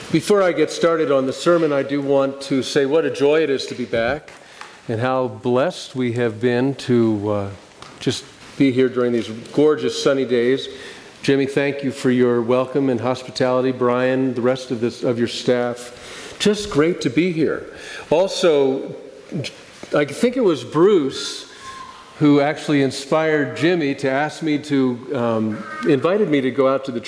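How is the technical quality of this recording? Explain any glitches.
No glitches or technical faults can be heard here.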